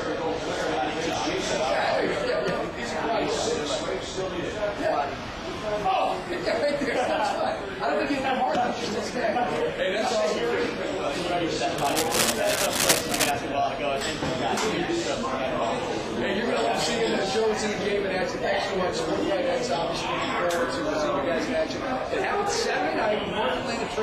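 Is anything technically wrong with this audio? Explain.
Yes. From 11.78 to 13.31 s there is cable scratch noise. The likely cause is a worn cable, connector or control being moved, so that its contact resistance jumped around rapidly for about a second and a half. Those fluctuations inject dense, irregular bursts of noise into the signal, reaching roughly the same loudness as the sound itself. The result is a harsh scratching, rustling layer sitting on top of the audio until it stops.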